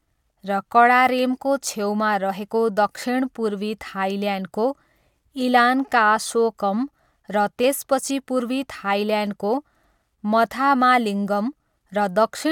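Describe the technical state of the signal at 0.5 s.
At 0.5 s the signal is intact, with no dropout, clipping, glitch or other fault audible at that point.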